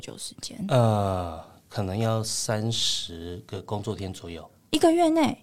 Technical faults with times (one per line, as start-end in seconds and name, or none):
1.39-3.66 digital radio blending to analogue